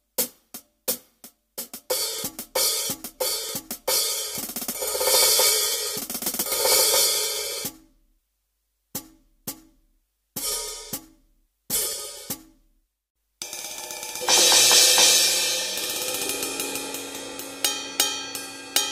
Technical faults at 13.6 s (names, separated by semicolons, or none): processor overload crackle